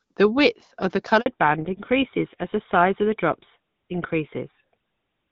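At 1.20 s, just after "width of the", a handover gap cuts the speech for 60 ms as the call switches networks. It is clean silence, not smeared concealment.

From 1.26 s to the end, a fallback to narrowband removes everything above 4 kHz. The duller, rougher tone points to a GSM-style codec replacing HD Voice, and unlike a brief filter glitch, it never recovers.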